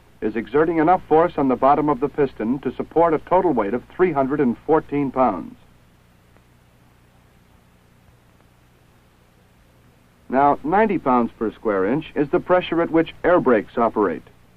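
Nothing technically wrong turns up anywhere in this one; there's no fault to point to and no time worth flagging.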